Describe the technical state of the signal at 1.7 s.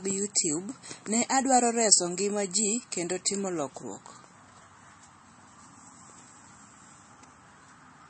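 At 1.7 s you're hearing the same MP3 compression damage that runs through the whole clip, and it's plainly audible. Nothing survives above 8.4 kHz, so the top end sounds shut off, and the speech has that watery, swirly quality where weak frequency lines flicker on and off between frames. The likely cause is an encoder starved of bits. The hard treble cut and the amount of smearing point to a low rate, around 32 kbps.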